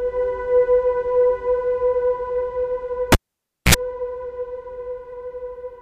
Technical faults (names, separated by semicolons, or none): cable pulled and plugged in